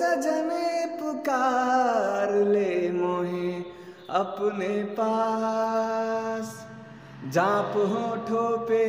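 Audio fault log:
No faults to log for this clip. Nothing in the sound calls for an entry.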